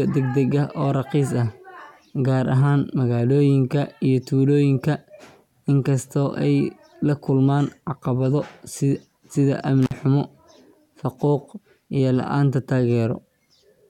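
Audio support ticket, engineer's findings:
Intermittent contact, 9.83–9.94 s: speech drops out abruptly with crackle at both edges and faint hiss in the gap, which lasts about 49 ms. Probable component: loose cable or plug in the signal chain. Mechanism: the conductor briefly separates, so signal stops; contact bounce at make and break produces the crackle.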